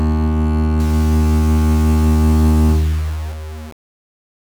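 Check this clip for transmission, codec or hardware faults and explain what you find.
One fault is present: low bit depth without dither, from 0.80 s to the end of the music. The signal has been rounded to very few levels, which fits a 5-bit word, likely without any dither applied. The error therefore follows the music, sitting roughly 25 dB below it, and is heard as grainy distortion that shifts with the sound. On a waveform, the trace shows coarse staircase steps. A spectrogram shows hash that rises and falls with the music rather than a steady, flat noise floor.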